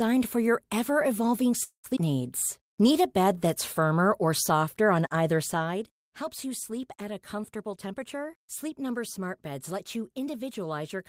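Just after "for your ever evolving", a call audio freeze runs from 1.63 to 1.87 s. The last sound is carried on for about 203 ms, fading into roughly 110 ms of near-silence, and then the speech resumes exactly where it stopped. The likely cause is delayed packets draining the jitter buffer. What sets it apart from a skip is that it inserts a pause but removes nothing.

Right after, at 1.96 to 1.99 s, comes a skip ahead. Around a tenth of a second of speech is simply gone, and the two sides are joined with only about 4 ms of fill. Unlike the freeze, there is no audible hold or gap, just an abrupt jump in content.

From 2.59 to 3.81 s, a jitter buffer slow-down plays the speech at 92% speed. Repeated pitch periods add 99 ms in total, drawing sounds out while the pitch stays unchanged. It differs from a freeze because the stretching is spread across the passage rather than arriving as a single stall.

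After "you sleep at a", from 7.63 to 10.34 s, a jitter buffer speed-up runs the speech at 106% with the pitch unchanged. Many tiny excisions remove about a fifth of a second in total, so the passage sounds slightly hurried. Because the losses are scattered rather than concentrated, there is no single jump as with a skip ahead.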